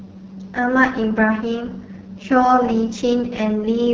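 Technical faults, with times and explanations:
Throughout, AMR wideband (HD Voice) codec. The speech sounds rough and raspy, with heavy codec damage. AMR-WB models the vocal tract and drives it with pulses to rebuild the band up to 6.4 kHz. Above that, up to 7 kHz, it adds shaped noise instead of real detail. The harsh, grainy texture points to one of the codec's lowest rates, which fits about 6.6 kbit/s. At such a rate the pulse coding is too coarse to keep the sound smooth.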